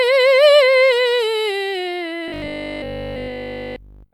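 From 2.28 s to 4.12 s, the playback likely ran short of fresh audio and kept refilling the gap by repeating the last short buffer, skipping the real material in between. The result is robotic sound from repeated short buffers. Across the whole stretch, the music collapses into a rigid, metallic buzz locked at 50 Hz, which fits a buffer about 20 ms long. The buzz only loosely tracks the original music underneath.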